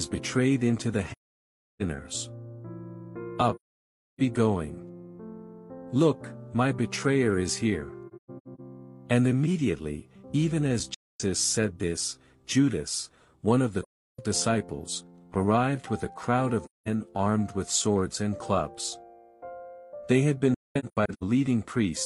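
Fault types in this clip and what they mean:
AAC frame loss with muting: the sound drops into soft-edged silences seven times, each lasting about 0.2 to 0.7 s, two of them broken into scattered shorter gaps. Missing frames were decoded as an all-zero spectrum, and the overlapping windows fade the sound out and back in.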